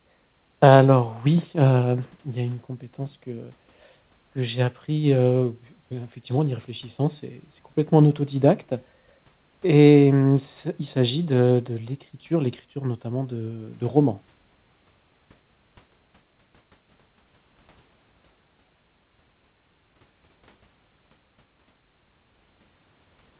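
Speech carried over a narrowband call path with nothing above 4 kHz, which fits G.711 A-law, and no technical faults are present.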